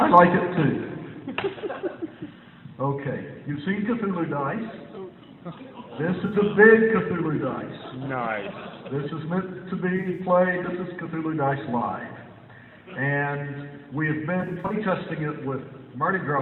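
Smeared, phasey patches at 6.26–6.35 s, 9.97–10.20 s and 14.41–14.74 s, the later two broken into short dropouts, the longest run about 40 ms. This is AAC frame loss with concealment: missing frames were rebuilt from the last good spectrum.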